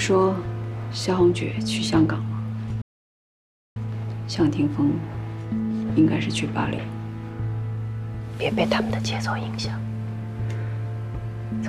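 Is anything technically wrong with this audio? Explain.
Yes. A playback stall occurs from 2.82 to 3.76 s. The sound stops dead for about 0.94 s, likely because the player ran short of data, then resumes.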